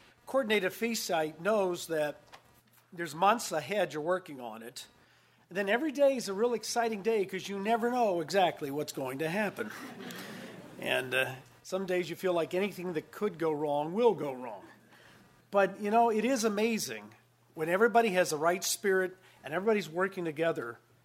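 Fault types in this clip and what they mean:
computer activity noise: a buzzy pulse train repeating at around 200 Hz, roughly 35 dB below the sound, runs throughout as shifting processor load disturbs the shared ground. A spectrogram shows regular vertical striations unrelated to the audio, and the waveform carries a fine ripple.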